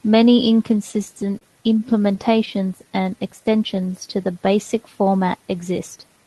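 In this speech recording, packets reached the receiver late or too slowly, so the jitter buffer ran dry repeatedly, causing repeated stalls (stutter). From 0.91 to 1.44 s there are four gaps, the longest 30 ms, and from 1.99 to 2.50 s another four, the longest 11 ms. Each time, the receiver stretched the last sound to cover the wait, about 59 ms and 40 ms of filler in total, so nothing is lost, but the speech catches and drags in small hitches. Next, the buffer was low on reserve, and between 2.84 and 3.93 s a jitter buffer slow-down repeats single pitch periods and pause fragments, adding 89 ms. The passage leading into "to the basic format" runs at 93% speed with unchanged pitch, so syllables sound slightly drawn out. Near the end the buffer held more than its target, and a jitter buffer speed-up from 5.96 to 6.24 s, just after "to the basic format", trims about 50 ms in pitch-period-sized pieces. 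That stretch plays at 115% speed at the same pitch and sounds hurried. Underneath it all is the coding texture of the Opus call path, with the top end rolling off near 12 kHz, which fits a low bitrate around 20 kbps.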